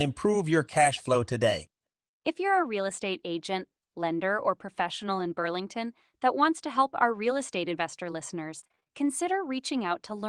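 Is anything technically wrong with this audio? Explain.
Yes. From 8.59 to 8.91 s there is repeated packet loss, giving a robotic sound. Packets kept arriving late or not at all. Each hole, the longest about 28 ms, was patched by repeating the previous sound. Roughly half that stretch is filler, so the speech turns choppy with pieces missing.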